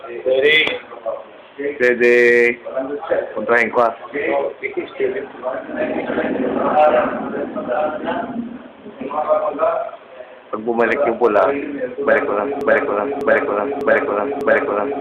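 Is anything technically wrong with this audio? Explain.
Yes. From 12.61 s to the end there's a broken-record loop: a 0.6 s fragment repeats exactly, back to back, four times. The player or stream likely stalled and kept resending its last chunk, so whatever should have played there is lost.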